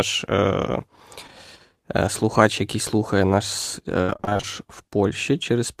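At 1.27–1.30 s, short concealed packet loss: about 20 ms of speech arrived too late, and the decoder extrapolated the preceding sound, leaving a brief smear.

From 4.02 to 4.45 s, repeated packet loss gives a choppy, robotic sound. A rapid string of dropouts, the longest 67 ms, was patched over, so about half the stretch is synthesised.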